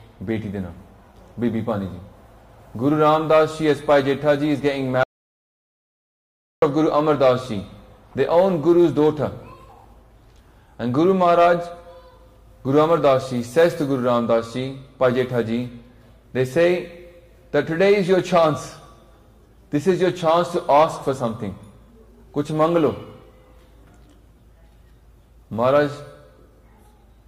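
At 5.04 s the sound cuts out abruptly and stays gone until 6.62 s, an audio dropout to silence lasting about 1.59 s. Nothing survives in the gap, not even room tone, so whatever was happening there is lost. The input was likely interrupted, whether by a disconnected device, a failed link or a mute, while recording carried on writing silence. On a waveform this shows as a flat line between sharp edges, and on a spectrogram as a blank vertical band across all frequencies.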